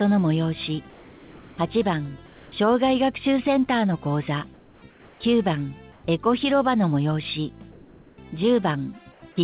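The sender's activity detector likely switched off transmission in each quiet gap, so the receiver filled those pauses with synthesized noise: comfort noise in place of the background. This happens at 0.9–1.58 s, 2.26–2.52 s, 4.54–4.82 s, 4.9–5.2 s, 5.92–6.04 s, 7.72–8.18 s and 9.12–9.22 s. The background is already faint, about 26 to 31 dB below the loud parts. During each gap it turns flat, steady and featureless, and drops about 2 to 4 dB. The audio is also band-limited, with nothing above 4 kHz.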